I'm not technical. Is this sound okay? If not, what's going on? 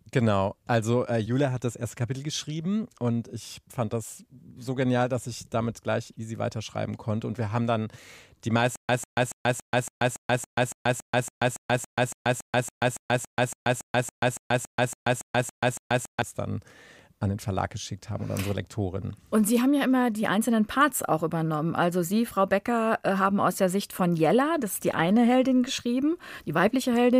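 No. From 8.76 to 16.22 s the speech stutters with silent gaps. A tiny piece of sound, about 0.15 seconds long, plays, then stops dead for about 0.13 seconds. That repeats 26 times at a steady beat, roughly three and a half times a second. The likely cause is playback stalling and replaying its last fragment while it waited for more data. Whatever should have played during those seconds is gone.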